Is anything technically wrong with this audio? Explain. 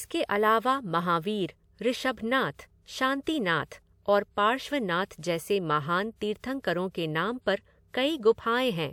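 Yes. Pre-echo appears before attacks at 3.23–3.27 s, 5.19–5.23 s, 6.16–6.21 s and 6.38–6.44 s, spreading 41 to 56 ms. Block-wide quantisation noise fills the quiet before each onset, so a short hiss precedes a softened attack. On a spectrogram it shows as a broadband smear ahead of the transient, and in the waveform as low-level fuzz before the sharp rise.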